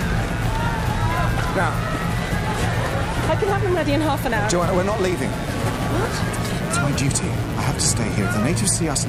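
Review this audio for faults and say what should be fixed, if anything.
Mains buzz, present throughout: switching spikes from a 60 Hz supply leak in twice per cycle, spraying harmonics into the kilohertz range, roughly 20 dB below the sound. Shield and ground the signal path, and keep cables away from dimmers and rectifying power supplies.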